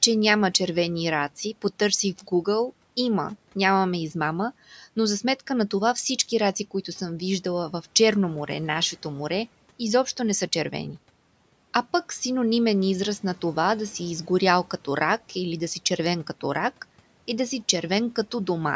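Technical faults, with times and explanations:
2.21–2.47 s, speech cut by the noise suppressor: just after "червени раци потърсих в" and before "има нямаме измама но", the suppressor mistook a quiet stretch of speech for the room noise sitting about 27 dB below it and pulled it down by up to about 10 dB, for around a tenth of a second in total. That part sounds swallowed and faint. On a waveform the envelope dips sharply, and on a spectrogram the harmonics and consonant energy thin out below the 8 kHz ceiling.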